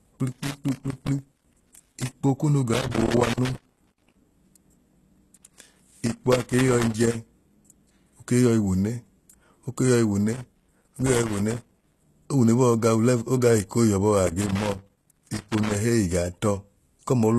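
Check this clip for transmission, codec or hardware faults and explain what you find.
Two faults run through this speech clip: codec damage across the whole clip and repeated bursts of crackle.

The whole clip carries plainly audible codec damage, with nothing above 12.3 kHz. The likely cause is HE-AAC compression at a low bitrate, around 16 kbps. Treble above the coded band is rebuilt from copied lower bands, so its harmonics don't align and the sibilance turns gritty.

Loose connector crackle occurs in five irregular bursts, from 0.32 to 2.12 s, 2.74 to 4.17 s, 5.36 to 7.16 s, 10.33 to 12.02 s and 14.27 to 15.75 s. A worn or dirty contact repeatedly makes and breaks, chopping the signal into scratchy, crackling noise.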